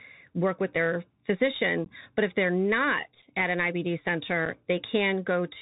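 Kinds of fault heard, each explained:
Bluetooth CVSD headset codec: The whole clip has that narrowband headset sound, with nothing above about 4 kHz. The sound points to a 64 kbps CVSD link, where each sample is a single up-or-down bit with a step size that adapts. The step can't keep up with loud, bright moments, so those distort, s sounds come out scratchy, and there's a grainy hiss under the speech. The damage is plainly audible.
Unconcealed Bluetooth headset packet loss: Small chunks of audio between the headset and phone went missing, and nothing filled them in, so there are short holes with abrupt edges. The first is a 15 ms gap at 1.85 s, about two packets' worth. A 7.5 ms hole follows around 3.22 to 3.25 s, right before "at an", and another at 4.46 s. After each one the sound comes back briefly quieter, as the CVSD step size recovers.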